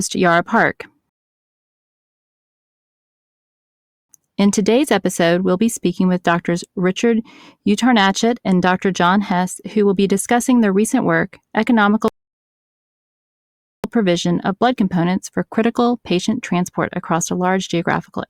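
A rebuffering stall cuts the speech to silence at 1.09 s for 3 s, then again at 12.08 s for about 1.8 s. Playback ran dry, so a flat, empty gap appears in the waveform and spectrogram. Speech resumes exactly where it stopped.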